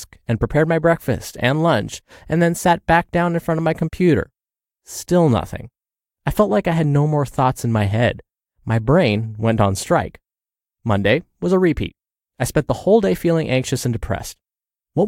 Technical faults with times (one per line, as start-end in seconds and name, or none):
none